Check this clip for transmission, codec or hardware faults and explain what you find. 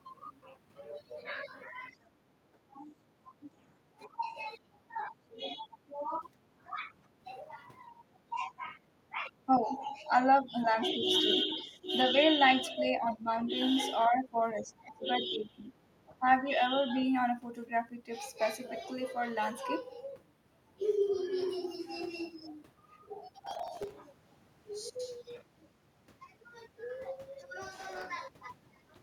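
Three kinds of fault are present: speech suppressed in double talk, a brief leak of the other side's voice, and processor overload crackle.

Speech suppressed in double talk occurs at 1.94–3.47, 4.07–7.26, 7.9–12.15, 13.08–13.27 and 14.08–16.45 s. The speech dips by about 10 to 20 dB. The likely cause is an echo canceller turning down both sides at once.

The other side's voice leaks through from 11.09 to 11.19 s. It is a faint scrap, about 25 dB below the speech, likely left behind by the echo canceller.

Processor overload crackle appears at 23.40–23.94 s and 27.77–28.05 s. Many missed deadlines leave short silent gaps, which fits a buffer of about 1.5 ms. The result is a gritty burst of crackle.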